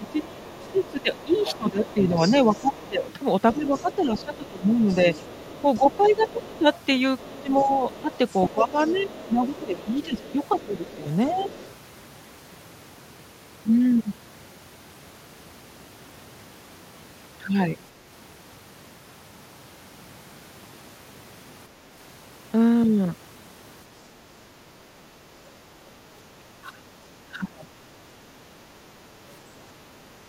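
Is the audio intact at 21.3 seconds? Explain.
Yes, the speech at 21.3 seconds plays through intact, with no dropout, glitch or other fault at that moment.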